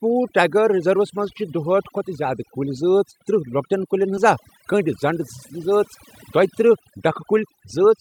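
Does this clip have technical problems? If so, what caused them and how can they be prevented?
Yes. Overdone noise removal affects the whole clip. The suppressor was set too aggressively. It cut frequency bands whenever they sat near its noise estimate, and the quiet parts of the speech went with them. The background drops and breaks up into twinkling specks. Prevention: use gentler reduction strength, or record with less background noise so heavy processing isn't needed.

A skip ahead occurs at 4.17 to 4.19 s. Roughly a second of audio is missing. Nothing fills the gap. The two sides are joined almost directly, so the speech jumps forward abruptly. This fits a jitter buffer that dropped a backlog to cut about a second of delay. Prevention: size the jitter buffer to absorb network delay spikes, and use a network that doesn't build large backlogs.

Jitter buffer speed-up occurs twice. From 4.73 to 5.64 s, playback runs at 104% speed and removes about 50 ms. 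From 6.37 to 7.84 s, it runs at 114% and removes about 200 ms. The receiver held more audio than its target. It trimmed short pitch-period pieces repeatedly to reduce the delay. Pitch stays the same, but the speech in the second stretch sounds hurried. Prevention: stabilise the network path to reduce packet bunching, and allow gentler, slower buffer adaptation.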